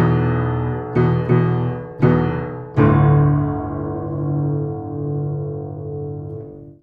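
No technical faults can be heard anywhere in this recording of sounds. There is nothing in it to time or explain.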